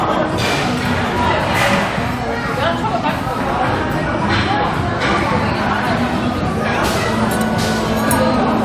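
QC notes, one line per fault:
No faults were found in these sounds. Nothing here calls for a QC entry.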